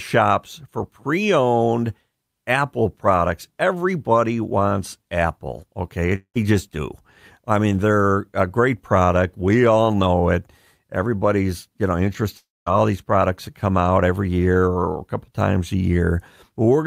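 At 6.15 s the speech smears into a fading buzz, then falls briefly silent until 6.37 s, picking up at "just do I mean". After "you know", a longer fade and gap runs from 12.37 to 12.68 s before "these products that come". Each is likely a long network dropout, with the receiver stretching the last sound over roughly 0.2 s and 0.3 s of lost audio.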